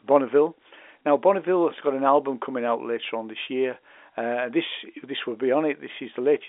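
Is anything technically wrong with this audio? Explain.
No, nothing is technically wrong: the speech carries the narrow band of an A-law telephone line, with nothing above about 3.7 kHz, as that coding normally produces.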